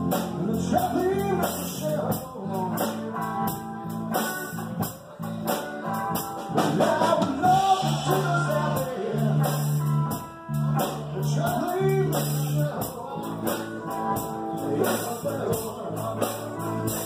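No technical fault can be heard anywhere in the recording. Nothing breaks into the sound at any point, and it runs on without interruption to the end.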